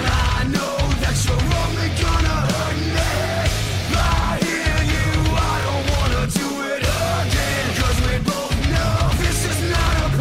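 Overlapping chunks at 1.60, 5.63 and 9.65 s: every 4.0 s a 23 ms piece of the audio replays at the join, giving a regular stutter.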